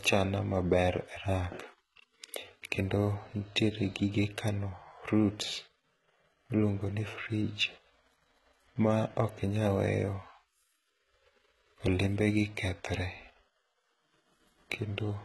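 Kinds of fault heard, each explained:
HE-AAC compression: The speech keeps a bright but synthetic-sounding treble up to a hard ceiling near 11.8 kHz, with heavy codec damage. Unlike a plain low-pass, the highs are present but rebuilt from copied lower bands, so sibilants sound gritty and metallic. This likely comes from HE-AAC at around 16 kbps.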